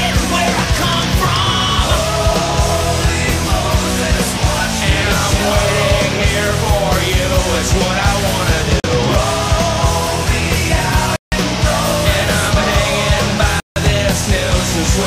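At 8.8 s the audio drops out for 40 ms, then at 11.16 s and 13.6 s for 160 ms each, all three blocks of digital silence. Each block's samples were replaced with zeros, typically because the output buffer was not filled in time. The signal cuts straight to silence and back with no fade. The 40 ms gap comes across as a pop, the two longer ones as audible holes.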